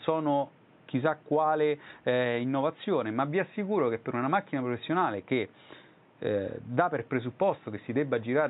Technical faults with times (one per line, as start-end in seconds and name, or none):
none